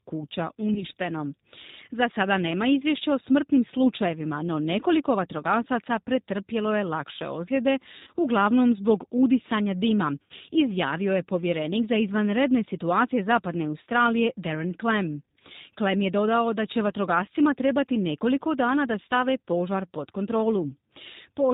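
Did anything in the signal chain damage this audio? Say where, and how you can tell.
Yes. At the codec stage, the whole clip carries plainly audible G.729 codec damage. Nothing above 4 kHz survives, and the speech has a rough, slightly synthetic edge, which fits 8 kbit/s G.729A. The codec rebuilds each 10 ms frame from a vocal tract filter, a pitch predictor and a few pulses. That parametric roughness distinguishes it from a simple low-pass filter or telephone band-limit, which would dull the sound without making it buzzy.

At the network stage, VoIP packet loss concealed by the speech codec appears at 0.74–0.83 s, 8.03–8.10 s after "pretrpjelo je lakše ozljede", 10.22–10.33 s after "uglavnom zbog udisanja dima", and 15.52–15.56 s. The lost spans run about 20, 40, 80 and 20 ms, which fits one, two or four 20 ms packets. The decoder stretched its last pitch and filter into a fading buzzy tone or coloured noise, and the sound stays weak briefly afterwards. 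A plain dropout would instead go silent and snap back.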